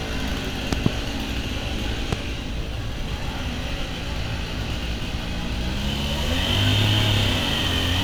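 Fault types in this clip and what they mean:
Loud pop: likely a voltage pulse added on top, a double pop at 0.73 s and a single at 2.13 s, far louder, with the sound continuing underneath rather than dropping out.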